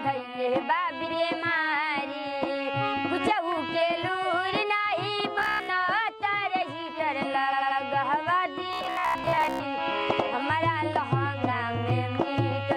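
Repeated frames at 1.03 to 1.12 s: a 92.9 ms block is played twice, a stutter, which fits two compressed frames resent and adding 92.9 ms. Repeated frames again at 5.16 to 5.22 s, a single 46.4 ms block doubled, which points to one frame written twice.

Robotic sound from repeated short buffers at 5.39 to 5.70 s: the sound turns into a rigid metallic buzz at 66.7 Hz, likely because roughly 15 ms buffers were looped while most of the real audio was skipped.

Repeated frames at 7.48 to 7.76 s: a 92.9 ms block plays three extra times, a longer stammer that adds 278.6 ms. The same robotic sound from repeated short buffers returns from 8.73 to 9.60 s, the same fixed 66.7 Hz buzz over the sound. Repeated frames at 10.08 to 10.17 s replay a 92.9 ms block once more.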